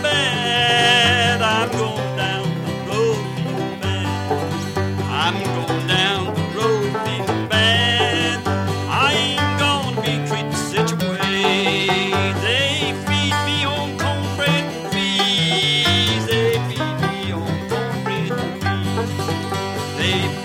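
Nothing stood out on listening to the sound in this clip.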